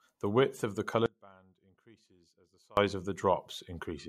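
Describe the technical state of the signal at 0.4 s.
At 0.4 s the speech signal is intact, with no audible technical fault at that moment.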